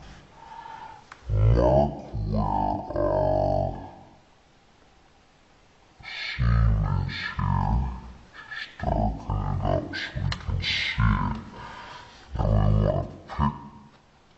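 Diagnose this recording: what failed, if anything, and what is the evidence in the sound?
Stereo read as mono throughout, a sample-format fault: interleaved left and right samples play as one channel, so the sound runs at half speed and a full octave low.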